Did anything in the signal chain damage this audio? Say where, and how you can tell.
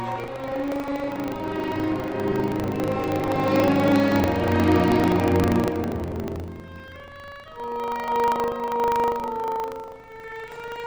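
Yes. Buffer tearing at the driver or buffer stage: a 25 Hz rattle wherever sound plays. Each 40 ms period splices in a sliver about 70 ms old, leaving regular vertical spectrogram seams.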